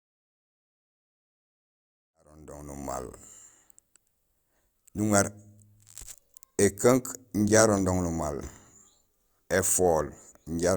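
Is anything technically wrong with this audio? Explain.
No, nothing technically wrong can be heard in this speech clip. It opens with a smooth fade-in that begins around 2 s and reaches full level at 3.12 s, rising gradually with no click or hard edge.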